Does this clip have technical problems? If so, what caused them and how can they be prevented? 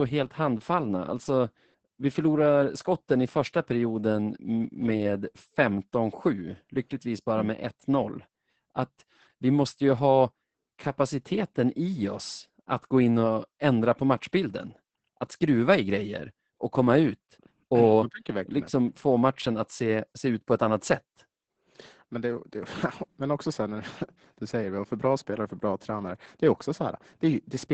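Yes. Throughout the speech, the sound is muffled, hoarse and faintly robotic, with nothing above about 8.7 kHz. This is heavy Opus voice compression. The encoder is running its linear-prediction speech coder in wideband mode and spending very few bits on the excitation signal that drives the vocal model, which fits a bitrate around 10 kbps. That coarse excitation produces the rasp and synthetic edge, while the band limit removes the top end. To prevent it, encode at a higher Opus bitrate, roughly 24 kbps or more for speech, so the coder keeps the full band and models the excitation accurately.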